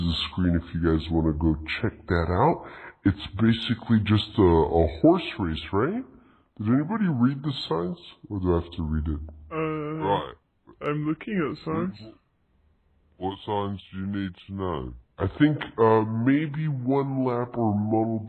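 Wrong sample rate, throughout the clip: the audio plays back slower than it was captured, with no conversion in between. Everything runs at about 0.73 times normal speed and drops about 5.5 semitones together, which fits 44.1 kHz material being played at 32 kHz.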